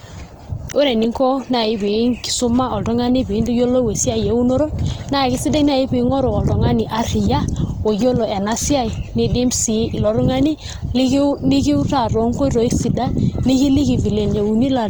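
Throughout, the speech sounds plainly grainy and rough, not swirly: likely Opus compression, which fills starved bands with noise rather than leaving MP3-style holes.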